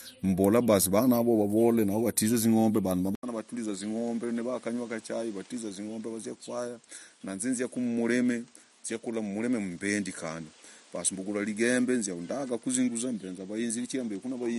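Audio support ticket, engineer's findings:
3.15 s onward: 80 ms gap, then duller speech. Spectrogram blank above 10.8 kHz, waveform about 10 dB smaller. Likely input switched to a poorer device.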